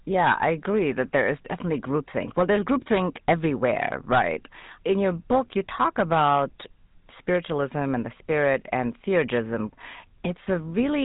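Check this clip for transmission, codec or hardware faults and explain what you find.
Two faults are present: a GSM full-rate codec across the whole recording, and a burst of hard clipping around the middle.

Throughout the speech, the signal has passed through the GSM full-rate codec. This codec models the vocal tract as a filter and drives it with a coarse, regularly spaced pulse excitation that keeps only a fraction of the original detail. The damage is plainly audible as a buzzy, gravelly roughness on the voice, which fits the low 13 kbps rate this codec runs at. Nothing above 3.8 kHz survives, so the top end sounds dull and boxy.

From 4.90 to 5.39 s there is hard clipping. For about half a second the signal exceeds what one stage in the chain can pass, by about 3 dB. The peaks are sliced flat instead of rounding over, and those squared tops throw extra harmonics high into the spectrum. 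The result is a crackly, distorted edge on the loudest parts of the speech in that stretch.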